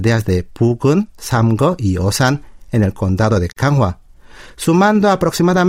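Right after "en el condado de", at 3.52 s, the speech drops out for about 41 ms before picking up again at 3.56 s. That's a gap at a join of encoded pieces: the audio was encoded in chunks, roughly 4 s each here, and glued back together untrimmed, so the encoder's start-up delay and last-frame padding sit in the middle of the speech. You hear a short hole, its edges smeared by the codec, and then the speech continues exactly where it left off.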